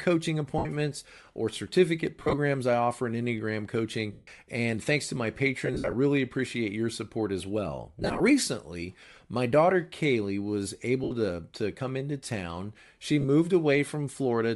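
Speech with a breathy, grainy edge throughout, the upper spectrum sounding noise-filled rather than detailed. That is the likely result of Bluetooth LC3 compression, and the damage is plainly audible, consistent with a 48 kbps stream in 7.5 ms frames. Lost LE Audio frames break the sound at 0.58–0.66 s, 2.19–2.34 s (after "or certificate", before "I offer in"), 4.12–4.28 s, 5.65–5.93 s (after "thanks to my", before "appreciate your support as"), 7.99–8.21 s, 11.04–11.11 s (before "to to come into") and 13.21–13.25 s. In each gap the decoder repeats the last spectrum with randomised phase, so the speech smears into noise. At 2.19, 5.65 and 7.99 s the losses come in scattered runs, the longest around 70 ms in the loss at 5.65 s.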